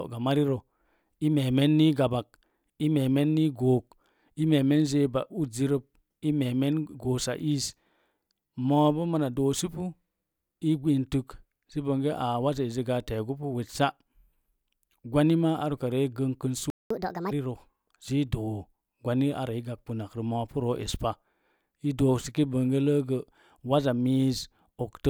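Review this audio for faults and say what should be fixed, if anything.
A playback stall cuts the speech off at 16.70 s. Silence lasts about 0.20 s, until 16.90 s. The player likely ran short of buffered data, or its output thread was blocked. The speech then picks up mid-flow. A deeper playback buffer and a higher-priority audio thread would prevent it.

Catch-up at higher speed follows at once, from 16.90 to 17.31 s. The player resamples its backlog to run at 1.5 times normal speed. Pitch rises by roughly seven semitones, so the speech turns thin and squeaky. Then it drops back to normal. Recovering with pitch-preserving time-stretching, or skipping the backlog, would avoid this.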